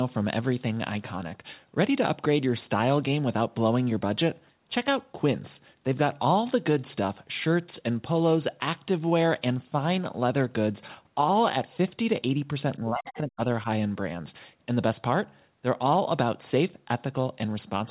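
From 12.78 s to 13.66 s the talker's level repeatedly dips and partly drops out, falling as far as about 30 dB at its deepest, with around half a second of the stretch affected in total. The pattern is speech suppressed in double talk, likely from an echo canceller that heard both sides at once, could not tell the near talker from loudspeaker echo, and attenuated everything together.

Inside that stretch, from 13.06 s to 13.18 s, a brief scrap of a second voice comes through, sitting roughly 15 dB below the talker. This is the other side's voice leaking through: far-end audio played on the device's loudspeaker likely reached the microphone, and the echo canceller did not fully remove it. It is short and faint. The whole clip carries a telephone-band sound with nothing above 4 kHz, which fits a narrowband G.711-type codec.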